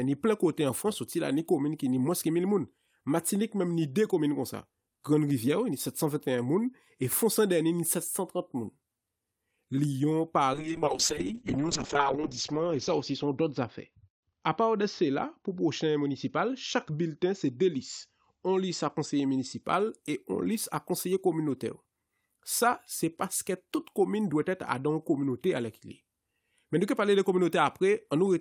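From 10.54 to 19.69 s, a call bitrate drop turns the speech rough and muffled, which fits a fall from 48 to 7 kbps. Highs above 8 kHz vanish just before "e on lis a".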